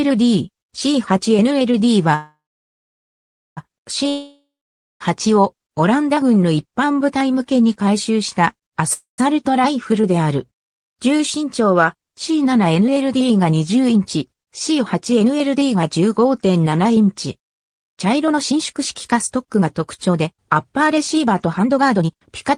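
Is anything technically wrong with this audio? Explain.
Yes. The audio has three kinds of fault.

A call audio freeze runs from 2.15 to 3.59 s, and a shorter one from 8.93 to 9.20 s. Each most likely comes from delayed packets draining the jitter buffer. The last sound carries on as a fading buzz, then goes silent for about 1.2 s and 0.13 s. Playback resumes where it stopped. This adds 1.41 s and 0.25 s of delay.

A long network dropout runs from 4.09 to 5.02 s. Most likely about 0.92 s of audio never arrived. A brief fading buzz gives way to about 0.54 s of silence. The sound then jumps ahead, and the lost stretch is simply gone.

A jitter buffer speed-up runs at 11.36 to 12.31 s (108%), 13.74 to 16.07 s (106%) and 17.84 to 22.52 s (123%). The buffer held excess audio. Short pitch-period pieces were cut repeatedly, removing roughly a tenth of a second, then 0.15 s, then a full second. 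The pitch stays the same, but the sound runs faster and feels hurried, most clearly in the last stretch.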